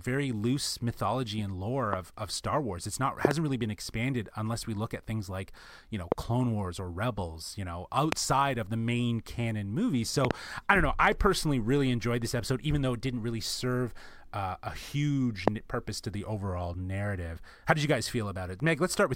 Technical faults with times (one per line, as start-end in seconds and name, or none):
1.93-1.95 loud pop
3.25-3.33 loud pop
6.12-6.14 loud pop
8.12-8.15 loud pop
10.25-10.33 loud pop
15.48-15.50 loud pop